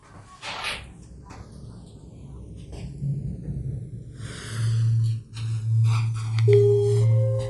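From the start and for the whole clip, the two channels are drifting apart. Each channel appears to run on its own clock, with a mismatch of very roughly 150 parts per million, so the inter-channel delay grows steadily and ends near a millisecond. Folded to mono, the resulting comb notches glide slowly in one direction rather than sweeping back and forth. That one-way, ever-slowing movement distinguishes it from a deliberate flanger effect, whose modulation cycles.

Also present throughout is a breathy, grainy edge on the upper frequencies, with nothing at all above 11.5 kHz. The highs sound hollowed out and partly replaced by hiss-like fill. The likely cause is Bluetooth LC3 compression, with artefacts that fit 10 ms frames at around 48 kbps. The grain is steady and granular rather than the chirpy, watery swirl typical of MP3 or AAC at low rates, and the hard band limit points to the chosen sample rate.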